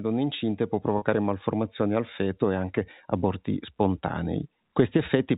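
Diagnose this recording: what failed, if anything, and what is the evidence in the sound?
Network stage: packet loss with pitch repetition at 0.98–1.02 s, after "donne incinte può" and before "malformazioni al feto e". About 40 ms went missing, which fits two 20 ms packets. The receiver looped the last pitch period, producing a buzzy hold. A spectrogram shows frozen, flat harmonics; the waveform shows identical repeated cycles.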